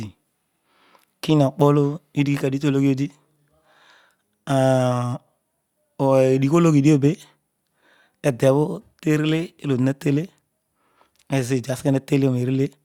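No faults are audible anywhere in the speech recording, so there is nothing to report.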